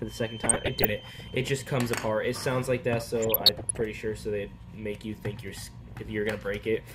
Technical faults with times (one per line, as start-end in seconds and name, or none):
0.00-2.57 feedback whistle
0.44-1.30 DAB burbling
3.23-3.82 DAB burbling
5.83-5.96 DAB burbling